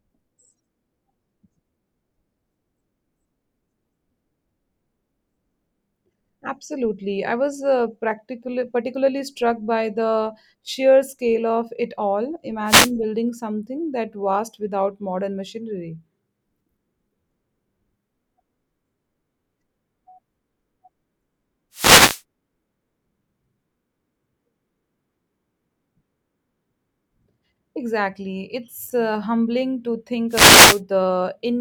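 The wireless microphone's radio signal fades as reflections cancel, letting receiver noise rise in short static swishes: wireless microphone noise hits at 12.66–12.91 s after "scale of it all", 21.72–22.22 s, and 30.29–30.81 s after "uh humbling to".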